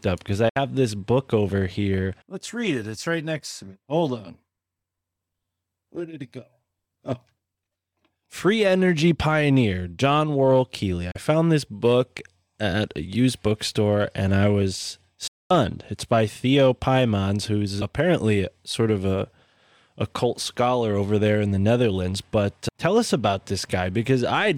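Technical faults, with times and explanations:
0.49–0.57 s, 11.11–11.16 s, 15.27–15.51 s: digital broadcast dropout. The receiver mutes bad frames with a quick 8 ms fade, leaving flat-line waveform gaps and blank spectrogram columns where audio is lost.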